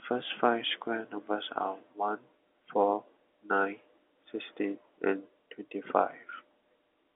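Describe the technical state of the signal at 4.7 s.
At 4.7 s the speech is intact, carried over the G.711 telephone coding with its usual narrow band that stops below about 3.8 kHz.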